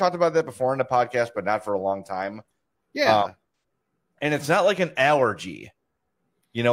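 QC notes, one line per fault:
3.58–3.63 s, AAC frame loss with concealment: a brief smeared patch where the decoder rebuilt missing audio from the last good spectrum, which fits about two lost frames.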